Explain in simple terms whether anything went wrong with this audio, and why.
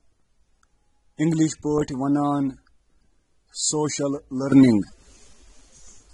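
Yes, two things went wrong. Throughout the clip the speech sounds dull and smeared, with nothing above about 11.8 kHz. This is plainly audible AAC compression, likely from squeezing the file too small. Unlike simple muffling, it adds a warbling or fizzy texture, especially on hissy sounds.

At 4.52 s a sudden gain jump makes everything louder at once and it stays that way to the end, likely from a level change applied without a fade. A speaker raising their voice wouldn't do this: here the background noise jumps up together with the speech, instantly.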